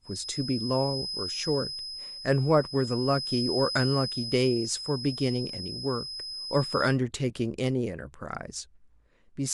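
From 0.0 to 6.99 s, a feedback whistle sits near 5.1 kHz, roughly ten dB under the speech, steady in pitch but slowly swelling and fading, likely from a speaker-microphone loop held just below runaway.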